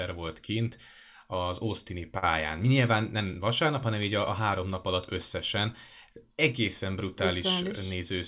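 A speech recording where, at 2.18 s, the sound briefly hangs: for about 60 ms, until 2.24 s, it is drawn out unnaturally with a faint buzzy dip before resuming. This is a short stall from a late packet. The packet arrived late, the jitter buffer emptied, and the receiver stretched the preceding audio by about 42 ms, then continued without losing anything, leaving playback that much later. The call path's band limit at 4 kHz fits G.711 mu-law.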